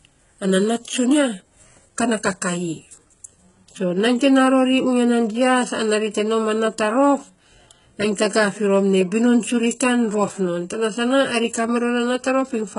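Throughout the speech, the treble sounds synthetic and gritty, with s sounds turning metallic and lispy and nothing above about 11.1 kHz. The likely cause is heavy HE-AAC compression, where copied-up bands replace the real high frequencies, consistent with a very low bitrate around 12 kbps.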